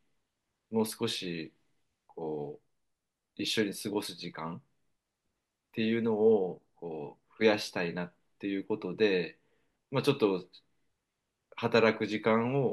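Nothing in this recording stands out as a technical fault, so there's no problem to point to at any moment along the way.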